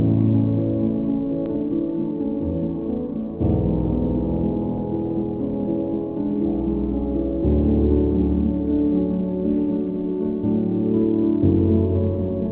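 At 1.46 s the audio jumps forward in a skip ahead: roughly a third of a second is missing and the two sides are butted together with no gap, as when buffered packets are discarded. From 1.55 to 2.53 s a jitter buffer speed-up follows, with the sound running about 9% fast at unchanged pitch as around a tenth of a second of pitch-period fragments is trimmed to shrink the excess delay. Throughout, the band stops at 4 kHz, consistent with a G.711 mu-law telephone codec on the call path.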